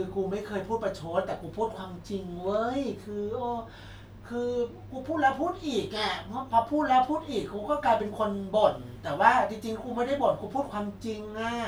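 No technical faults are audible.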